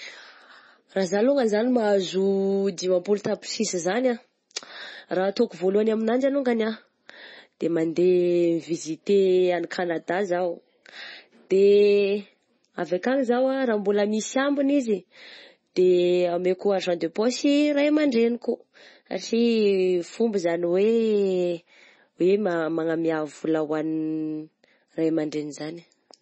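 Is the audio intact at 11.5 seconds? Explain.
No. Throughout the clip, including at 11.5 s, the speech likely went through heavy MP3 compression, at a rate that fits roughly 24 kbps. Starved of bits, the encoder drops everything above 8.3 kHz and switches weak frequency lines on and off between frames. The speech sounds dull, watery and swirly, with chirpy s sounds.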